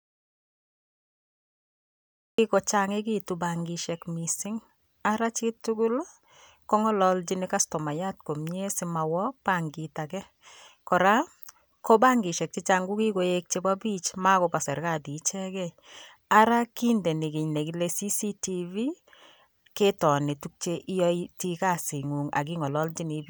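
From the start to 2.38 s the speech is absent in an audio dropout to silence: plain silence, no room tone, likely from a lost input while recording continued.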